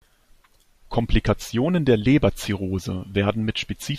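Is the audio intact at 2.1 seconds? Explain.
Yes, the speech is intact at 2.1 seconds, with no fault there.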